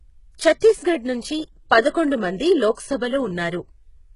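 A speech recording with heavy codec damage throughout. The treble sounds synthetic and gritty, and nothing reaches above 11.1 kHz. This points to HE-AAC compression, likely at a very low bitrate around 12 kbps. Here the upper band is rebuilt from copied lower harmonics rather than coded directly. Pre-echo appears at 0.60 s, from 1.90 to 1.94 s, and from 2.74 to 2.77 s. Each time, a short hiss of 10 to 40 ms smears in just before a sharp attack. Quantisation noise, spread across the transform block, leaks into the quiet moment before the onset.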